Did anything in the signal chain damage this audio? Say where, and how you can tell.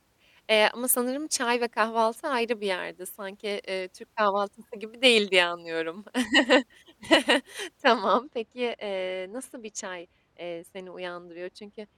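Yes. From 8.04 s to the end, the speech suddenly goes dull and muffled. The top end slopes away smoothly, down about 13 dB at 10 kHz relative to 1 kHz, with no notch or hard edge, and that points to de-emphasis applied wrongly at the decode or playback stage. A treble-cut filter meant to undo pre-emphasis was switched in on audio that never had any boost, or a second time on audio already corrected.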